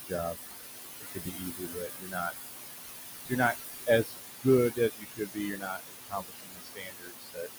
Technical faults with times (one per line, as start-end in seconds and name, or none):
0.00-7.58 noise suppressor artifacts
0.01-0.13 speech cut by the noise suppressor
1.01-2.33 speech cut by the noise suppressor
3.29-4.15 speech cut by the noise suppressor
4.70-7.58 speech cut by the noise suppressor